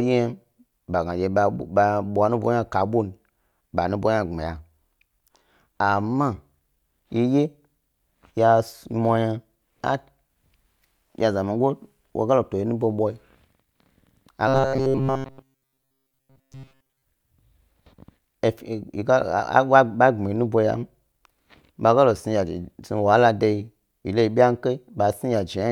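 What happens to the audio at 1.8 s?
Nothing goes wrong at 1.8 s; the speech continues intact through that moment, with no dropout, click or distortion.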